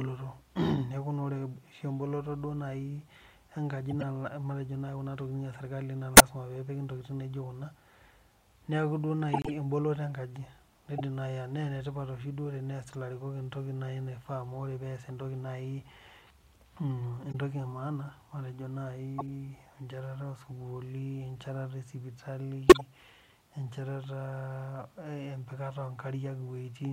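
Damaged compressed frames reach the decoder throughout the speech. Most are played anyway, and one run is refused.

The first corrupt frame decoded comes at 3.90 to 4.03 s. Flipped bits make the decoder rebuild the frame with wrong gains and misread spectral codes, so energy lands at frequencies the speech never had, and a short noisy chirp cuts in. The same fault returns at 6.14 to 6.20 s, 10.98 to 11.01 s, 12.93 to 12.95 s, 17.32 to 17.35 s, 19.18 to 19.29 s and 22.68 to 22.81 s. The bursts at 6.14 and 22.68 s are the loudest, peaking around -5 dBFS, and the one at 12.93 s is faint.

At 9.33 to 9.50 s the decoder rejects the corrupted data outright. This corrupt frame muted event makes the player substitute silence. The result is an abrupt hole of about 0.17 s, which fits several whole frames being dropped together. The speech then resumes on time, with no shift in timing.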